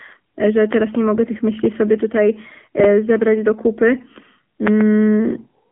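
Throughout, the speech passes through the AMR narrowband mobile codec at 7.4 kbps: only 200 Hz to 3.5 kHz survives, and the sparse pulse-driven model leaves a plainly buzzy, synthetic edge. A loud pop, a double pop roughly 15 dB above the speech, sits from 0.73 to 0.97 s, between "e że" and "nie mogę tych". Another double pop of about 20 dB follows from 4.67 to 4.83 s. Both likely come from a voltage step such as a switch or static discharge.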